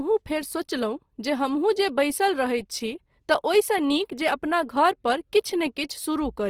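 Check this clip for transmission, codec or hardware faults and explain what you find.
One codec fault runs through the whole clip. From start to end, the speech carries plainly audible damage, likely from Opus compression in its music (CELT) mode. When bits run short, the encoder fills weak bands with folded or noise content. Tones turn grainy and rough, which fits a rate near 24 kbps. The bandwidth stays full, reaching about 20.2 kHz.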